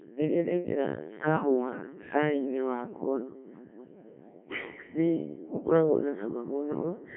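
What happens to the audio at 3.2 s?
At 3.2 s the speech is still under the Codec 2 vocoder damage that runs through the whole clip. The decoder rebuilds the voice from sine waves driven only by pitch, voicing, energy and a spectral envelope, so the original waveform is gone. The result is heavily robotic and buzzy, confined to a narrow band of about 150 Hz to 3.4 kHz with nothing above 3.7 kHz, which fits a very low rate near 1.3 kbit/s.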